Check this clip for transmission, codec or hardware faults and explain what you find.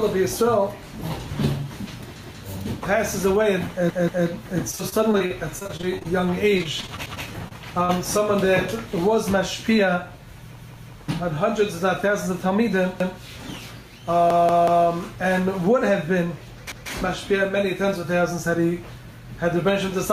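Several faults are present: gain pumping through the whole clip, repeated buffers, two stretches of repeated packet loss, and one slow-down and one speed-up from the jitter buffer.

Gain pumping runs from start to finish. The gain was likely set far too high, so a fast limiter or compressor pulls the level down on each loud sound. The level swings by about 5 dB, leaving a squashed, breathing quality.

Repeated buffers occur at 2.23 to 2.42 s, 3.90 to 4.27 s, 7.06 to 7.25 s, 10.59 to 10.96 s, 13.00 to 13.19 s, 14.30 to 14.86 s and 16.72 to 16.90 s. When fresh audio arrived late, the device replayed its last block. Each repeated piece lasts about 186 ms, which fits an 8192-sample buffer. It is heard one to three extra times with hard joins, giving a stutter.

Repeated packet loss with a robotic sound covers 4.71 to 6.06 s and 6.58 to 7.91 s. Packets kept going missing, and each hole was patched by stretching the last sound. 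The first stretch has 13 gaps, concealing 22% of it, with the longest at 42 ms. The second has 7 gaps, concealing 11%, with the longest at 35 ms. Both sound choppy.

Jitter buffer slow-down runs from 6.21 to 6.51 s. With its reserve low, the receiver repeated single pitch periods to rebuild it, adding 37 ms. The sound plays at 90% speed with unchanged pitch, so it is drawn out.

Jitter buffer speed-up runs from 11.22 to 12.12 s. With too much audio queued, the receiver trimmed short pitch-period slices, removing about 40 ms in total. The sound plays at 104% speed at the same pitch.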